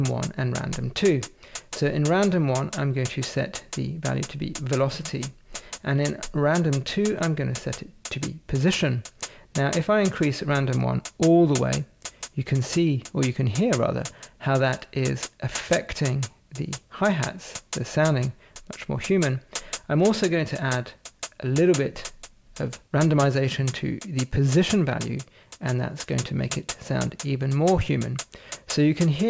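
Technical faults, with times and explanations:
Throughout, aliasing: content that lay above 8 kHz has folded back downward into the band rather than being removed, which points to a rate conversion from 44.1 kHz to 16 kHz made without an anti-alias filter. The mirrored energy, roughly 15 dB under the signal, lands at unrelated frequencies and makes bright, high material sound gritty and metallic. Simple band-limiting would sound dull and clean; here the spectrum stays dense right up to the 8 kHz edge.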